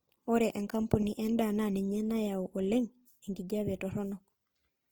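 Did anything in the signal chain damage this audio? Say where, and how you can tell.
Yes. The damage is at the codec stage and runs through the whole speech clip: the sound has a rough, grainy texture, yet the top end stays open and bright. That points to Opus compression, likely in its music (CELT) mode at a low rate, which fits about 24 kbps. When bits run short, the encoder keeps each band's energy but fills the fine detail with noise or copies of lower bands. On a spectrogram, the harmonics look smeared and speckled rather than showing the sharp holes typical of MP3, and they still reach full bandwidth.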